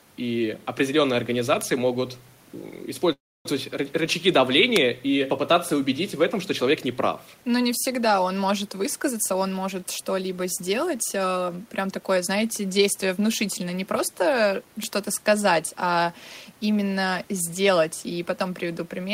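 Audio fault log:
1.61 s, 4.76 s and 14.84 s, bit error spike: Each is a single sharp tick, broadband and unrelated to the speech. The first lands right after "и определенные", the second just before "и попытаться убедить в". A flipped bit in a stored or transmitted sample makes its value jump by a power of two and snap straight back. The tick at 4.76 s spans three consecutive samples rather than one.
3.12–3.46 s, call audio freeze: The sound stalls for about a third of a second. A brief buzz or hiss continuing the last sound fades into roughly 0.28 s of near silence before speech resumes where it stopped, with nothing missing. The likely cause is delayed packets draining the jitter buffer, so the receiver stretched the last audio to cover the wait. The inserted gap adds about 326 ms of delay.
9.11–12.30 s, jitter buffer speed-up: Between "не всегда он может" and "действие внушительное не просто" the speech sounds hurried, running at about 109% of normal speed while the pitch stays unchanged. 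After a backlog built up in the jitter buffer, the receiver repeatedly cut out tiny pitch-period-sized pieces to bring latency back down. About 0.3 s was trimmed in total, and the room noise, about 33 dB below the speech, carries through this stretch as well.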